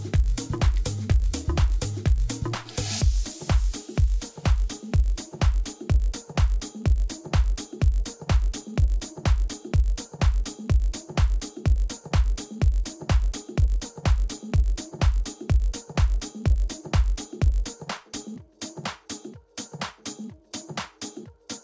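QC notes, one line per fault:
throughout: resampler restarted on every block. A steady 50 Hz buzz sits under the sound and vanishes in silences. Each block was converted alone, so its edges lacked true neighbouring samples. The rate fits 20 ms blocks, pointing to a 48 kHz to 16 kHz conversion.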